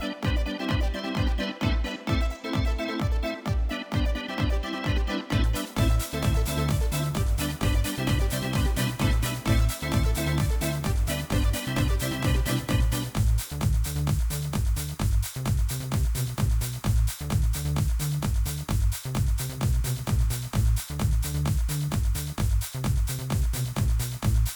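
A doubled audio track runs throughout. A second full-band copy trails the original by around 400 ms at roughly equal level, without any decay. Likely a duplicated capture path.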